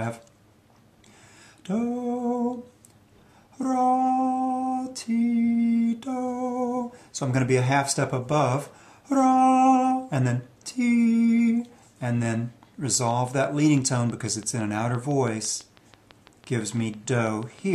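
From 12.94 s to 17.60 s a train of clicks runs over the sound: around thirty near-identical pulses at a steady 6 per second, each peaking at about the level of the audio itself. The likely cause is interference from nearby equipment or a faulty connection or power supply injecting the same pulse again and again. The even spacing and matching shape set it apart from random crackle, and the clicks sit on top of the sound rather than cutting it out.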